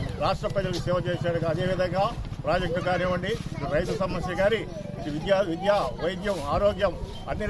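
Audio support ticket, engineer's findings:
Nothing stood out on listening; no fault to report.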